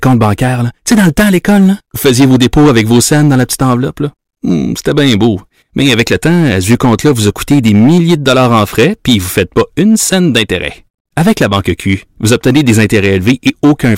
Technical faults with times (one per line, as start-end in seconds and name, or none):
0.00-13.97 hard clipping